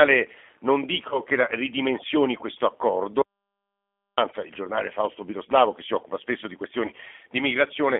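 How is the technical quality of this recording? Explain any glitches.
The recording has poor technical quality: plainly audible low-bitrate telephone coding throughout, two brief concealed losses, and one stretch of dead silence.

Throughout, the speech has been squeezed through the G.729 codec, at 8 kbit/s judging by its character. The codec rebuilds the voice from a vocal-tract filter, a pitch predictor and a handful of pulses per short frame. It passes only about 250 Hz to 3.5 kHz, so the sound is thin and boxy, with a plainly audible rough, synthetic grain on every syllable.

From 1.09 to 1.20 s, and again from 6.86 to 6.92 s, there is VoIP packet loss concealed by the speech codec. Each gap points to a single lost 20 ms packet. The decoder filled it by extending its last pitch and filter settings at falling gain. The voice smears into a short buzzy tone or coloured noise that fades, and stays weak or distorted after it, because each frame builds on the last.

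From 3.22 to 4.18 s there is an audio dropout to silence. The sound cuts out mid-flow for about 0.96 s into dead silence, with no room tone, and whatever was said then is gone. The likely cause is that the input was lost, through a link failure or a momentary mute, while the recorder kept writing silence.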